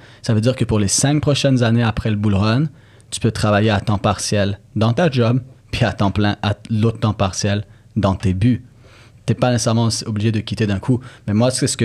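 A speech recording with nothing technically wrong with it.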